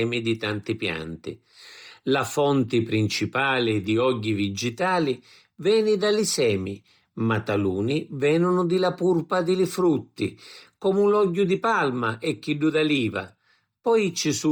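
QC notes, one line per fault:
Throughout: Bluetooth LC3 compression. Heavy grainy, breathy hiss coats the upper speech band, where coarse transform coding has likely swapped detail for filled-in noise, fitting about 32 kbps with 10 ms frames. Content still reaches about 20.1 kHz, so this is not a band cut-off.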